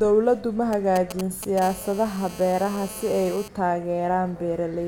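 A GSM handset close to the recording chain starts signalling from 0.73 s to 1.59 s, sending short clusters of radio bursts, and the audio circuitry rectifies them into the signal path. These GSM signalling bursts come through as a galloping dit-dit-dit run of brief buzzes at the 217 Hz burst rate, sitting roughly 10 dB below the speech. The pattern is irregular and stuttering, clearly separate from the talker.

From 1.62 s to 3.48 s the phone moves into a call and transmits continuously at 217 bursts per second, so the rectified pulses now arrive without a break. This GSM phone buzz is a steady, hard, raspy drone at 217 Hz carrying a dense stack of harmonics, about 18 dB below the speech. It bears no relation to the speech itself and runs nearly steady underneath it through the stretch.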